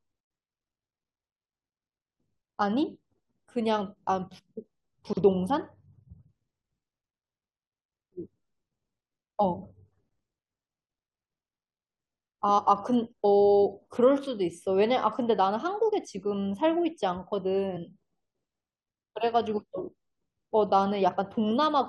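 Chunks out of order at 5.05 to 5.17 s in this speech recording: one 40 ms chunk arrives two chunks late and plays after the material that should follow it, so nothing is lost but three hard joins produce a brief jumbled moment. Damaged data in a compressed stream causes short blips at 8.24, 12.57, 17.76 and 21.13 s, where corrupted frames make the decoder lose sync and jump ahead to the next valid frame header.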